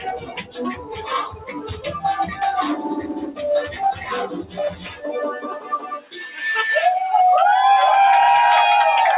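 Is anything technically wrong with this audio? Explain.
Yes. A noise suppressor designed for speech was left running on this material. It treats steady tones, ambience and decaying tails as noise and pulls them down, so the level swings by around 15 dB and the sound pumps, flutters or thins out.

Sound cut by the noise suppressor occurs in four stretches: 0.0 to 1.09 s, 1.27 to 1.85 s, 4.42 to 5.04 s and 5.46 to 6.13 s. In each, the suppressor judged the held or fading parts to be noise and dropped them by about 12, 10, 11 and 14 dB respectively. Roughly half a second to three quarters of a second of each stretch sinks, while sudden onsets come through.

The band ending at 4 kHz points to a narrowband call codec such as G.711 at 64 kbps, and is not a fault in itself.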